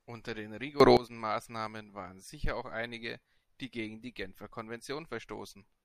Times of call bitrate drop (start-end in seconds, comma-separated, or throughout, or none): none